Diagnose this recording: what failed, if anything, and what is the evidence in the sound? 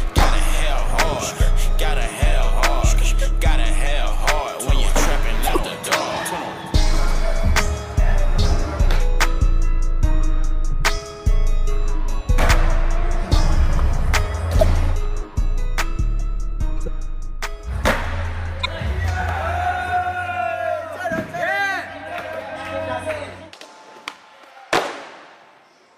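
The codec stage failed: a corrupt frame was decoded four times, at 5.43 to 5.57 s, 14.61 to 14.64 s, 16.86 to 16.88 s and 18.61 to 18.66 s. Each is a loud chirp or noise burst, one quieter, from damaged frame data misplacing energy across frequencies. Unlike packet-loss concealment, the damaged frames are played rather than replaced.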